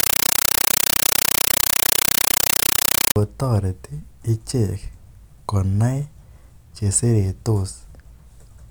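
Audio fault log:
0.00–3.16 s, compressed stream played as audio: very loud, chattering static replaces the speech. A Dolby Digital bitstream on the digital link is being treated as ordinary samples instead of being decoded. Each coded frame becomes an 8 ms burst of noise followed by zero padding, repeating 31.25 times a second. That steady 32 ms cycle produces the rattling buzz, and it fits an AC-3 stream at about 384 kbps.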